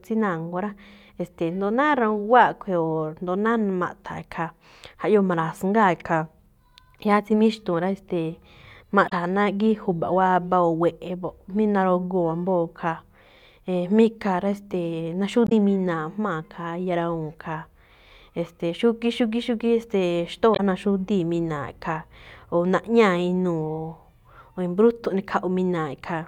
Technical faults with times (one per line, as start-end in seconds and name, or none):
9.05-9.12 damaged data in a compressed stream
15.45-15.52 damaged data in a compressed stream
20.52-20.60 damaged data in a compressed stream